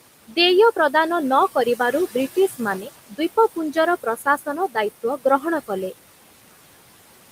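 Noise suppressor artifacts run through the whole clip. The suppressor pulls the room noise, which sits about 16 dB below the speech, down by about 18 dB in the gaps, so the background pumps between phrases.

Speech cut by the noise suppressor occurs at 2.36 to 2.61 s, 2.81 to 2.90 s, 4.03 to 4.77 s and 5.03 to 5.45 s. Here the suppressor mistakes quiet speech for noise and turns it down by up to about 12, 8, 14 and 16 dB. Brief stretches of soft sound, roughly a tenth of a second to a third, come out swallowed and faint.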